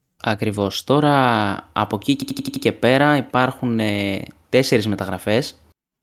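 A speech recording with a system hang loop from 2.22 s to 2.65 s. One 85.3 ms fragment repeats exactly five times, producing a machine-gun stutter at about 11.7 Hz. The host or driver stalled while the audio hardware kept replaying the same ring buffer, and the fragment length fits a 4096-sample buffer. When playback resumes, the speech picks up where it left off, with essentially nothing skipped.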